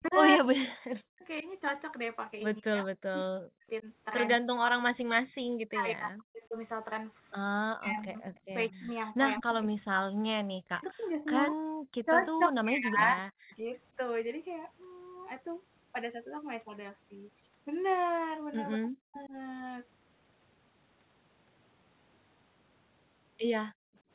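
Speech suppressed in double talk runs through this speech clip from 0 to 13.73 s, with roughly 7 s of the voice dipping or cutting out, at worst by about 40 dB, and again from 18.76 to 19.34 s. This is likely an echo canceller that could not tell the near talker from loudspeaker echo while both sides spoke, so it turned everything down. Echo leak appears at 0.05 to 1.43 s, 7.94 to 9.54 s and 11.48 to 13.56 s as a delayed copy of the voice trailing by 196, 208 and 213 ms. It sits about 20 dB below the speech in the first and last stretches and only about 10 dB below in the middle one, likely residual echo that a speakerphone's canceller failed to remove and sent back. Background gated by the echo canceller drops the room sound by about 40 dB from 23.71 to 24.03 s, roughly a third of a second, because the canceller clamped the microphone while the loudspeaker was playing and then released it. 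Through all of this the audio is band-limited to 4 kHz, which fits a narrowband telephone codec such as G.711.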